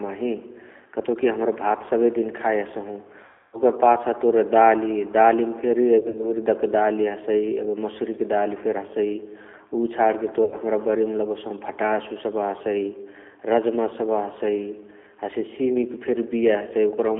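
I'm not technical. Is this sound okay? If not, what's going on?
No. The whole recording went through the G.729 codec, a phone-call compressor that rebuilds the sound from a simplified model. That gives it a thin, telephone-like tone with a slightly rough, synthetic edge, which is more than the plain muffling of a narrow phone line.

There are also three moments of VoIP packet loss concealed by the speech codec, where pieces of the call went missing. At 3.25 to 3.61 s about 280 ms was lost. At 5.99 to 6.33 s about 100 ms was lost in short scattered bits. At 10.44 to 10.55 s about 80 ms was lost. Each gap is filled with stretched, buzzy or noisy sound that fades, not silence or clicks, and it stays weak or distorted for a moment afterwards.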